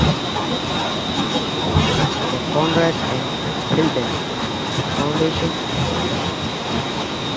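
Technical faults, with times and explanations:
0.0–1.75 s and 1.95–7.36 s, echo leak: a fainter copy of the speech trails the original by about 0.81 s, roughly 10 dB quieter. This is likely a loudspeaker's output picked up by the far-end microphone, escaping its echo canceller and returning down the call.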